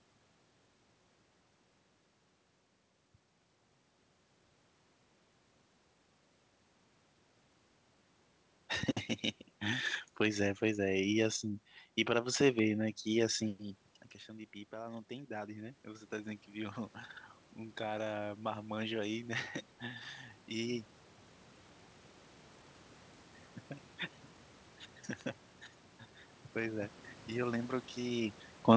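Speech recorded over a call, with sharp pops on top of the sound at 8.83 to 8.86 s and as a quick double pop between 12.41 and 12.61 s, each peaking about 10 dB above the speech. These loud pops are likely voltage pulses from a plug, switch or static getting into the signal. After the talker moves back around 13.5 s and the level drops by about 16 dB, voice and background swell together from 13.58 to 16.83 s. This is automatic gain rising: the gain control raises its gain by about 8 dB to compensate. At 25.21 s a single hard tick cuts across the spectrum, a bit error spike in which a flipped bit over two samples makes the waveform jump and snap back. Nothing is heard above 8 kHz, which fits a G.722 call path.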